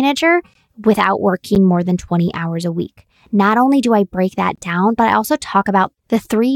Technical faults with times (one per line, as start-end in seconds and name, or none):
0.54 gap between stream segments
1.55 gap between stream segments
4.55-4.58 gap between stream segments